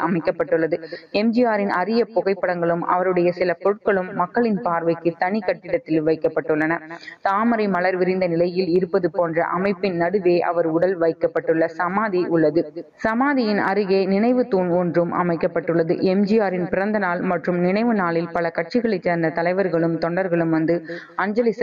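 Input gain appears to be set far too high for the microphone, most likely leaving a fast limiter or compressor to drag the level down on every loud sound. The result is gain pumping throughout the whole clip, with the swing reaching something like 15 dB. Loud and quiet passages sit unnaturally close together, so the audio sounds squashed.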